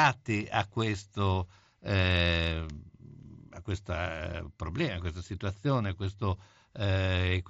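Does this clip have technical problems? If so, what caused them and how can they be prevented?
No, nothing stood out on listening to this speech clip, so there is nothing here to trace to a cause or to prevent.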